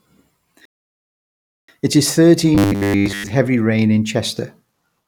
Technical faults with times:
0.65-1.69 rebuffering stall
2.55-3.30 robotic sound from repeated short buffers

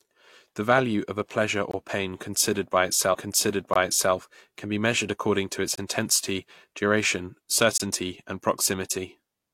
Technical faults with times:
1.71-1.73 gap between chunks
3.73-3.76 gap between chunks
5.76-5.78 gap between chunks
7.78-7.80 gap between chunks

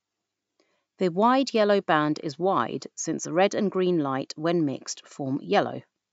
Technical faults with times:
0.21-6.05 clock slip clicks

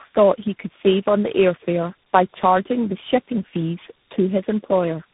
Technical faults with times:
0.00-5.13 tandem speech coding

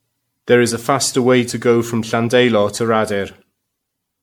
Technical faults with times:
0.00-4.23 generation loss

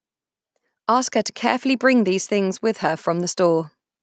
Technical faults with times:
1.62-3.45 automatic gain rising

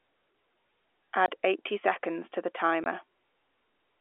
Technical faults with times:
1.26-1.28 packet loss filled with silence
2.84-2.86 packet loss filled with silence

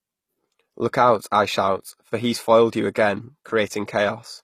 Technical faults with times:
0.00-4.44 HE-AAC compression

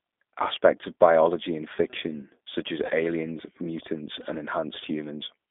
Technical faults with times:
0.00-5.51 G.729 codec
2.86-2.92 VoIP packet loss concealed by the speech codec

